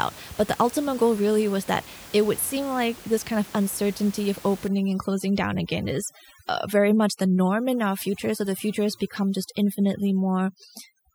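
From 4.68 s to the end of the speech at 11.15 s, the background suddenly drops to near silence dotted with twinkling specks. This is overdone noise removal: a noise reducer set far too aggressively keeps cutting individual frequency bands whenever they come close to its noise estimate. It removes the room noise, which sits about 21 dB below the speech before 4.68 s, but it also strips away the quieter parts of the voice.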